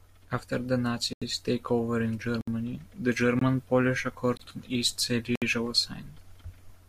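Blocks of digital silence occur at 1.13–1.22 s, 2.41–2.48 s, 3.39–3.41 s, 4.37–4.40 s and 5.36–5.42 s (85, 64, 21, 21, 64 ms). Likely unfilled output buffers drop the speech abruptly to silence, heard as short holes.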